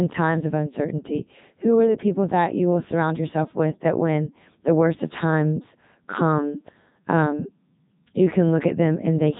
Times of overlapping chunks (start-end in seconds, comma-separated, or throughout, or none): none